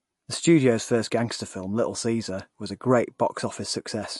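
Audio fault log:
Throughout, MP3 compression: the speech has a watery, swirly edge and nothing above about 11.3 kHz, so the top end sounds cut off. Likely a low-bitrate encode around 48 kbps starving the encoder, which drops the treble and lets weak components flicker between frames.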